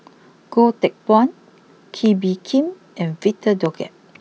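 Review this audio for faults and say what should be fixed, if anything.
A voltage step, likely from a plug, switch or static discharge, entered the signal path, causing two loud pops at 2.06–2.08 s and 3.66–3.68 s, each a few dB above the speech. Prevent this by securing connections, keeping switches off during recording and grounding equipment properly.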